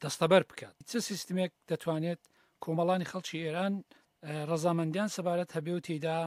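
No technical faults can be heard anywhere in this audio. At no moment does anything go wrong in the sound.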